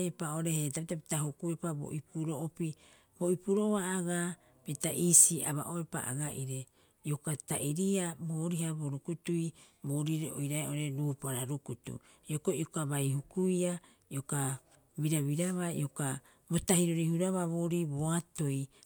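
A speech recording with nothing technically wrong with it.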